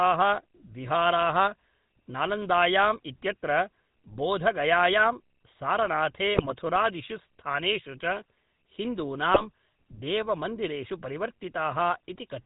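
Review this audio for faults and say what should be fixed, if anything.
The whole recording carries GSM full-rate codec coloration, a buzzy, gravelly roughness consistent with the 13 kbps full-rate coder. It rebuilds the voice from a vocal-tract filter driven by a coarsely sampled pulse train. On a spectrogram, energy stops sharply at 4 kHz and harmonics look smeared and grainy. To prevent it, record or route the call over a wideband path rather than legacy GSM full rate.

GSM bit errors appear from 6.34 to 6.52 s and from 9.32 to 9.44 s as squawks, pops and gargling. Corrupted filter, pitch and gain parameters distort each affected frame. On the waveform these show as sudden level bursts, and on a spectrogram as blotchy, misplaced bands spanning 9 and 4 of the 20 ms frames. To prevent them, use a stronger radio link or error concealment that mutes or repeats frames that fail their checks.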